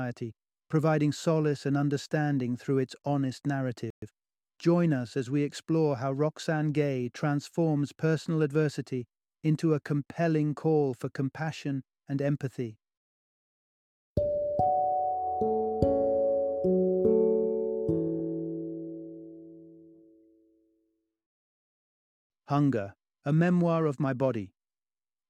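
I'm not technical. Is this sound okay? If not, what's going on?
No. At 3.90 s there is a playback stall: the sound cuts out for 120 ms, likely because the player briefly ran out of data. From 4.02 to 4.14 s comes time-compressed catch-up: the player rushes to recover, so the audio plays at double speed, at normal pitch.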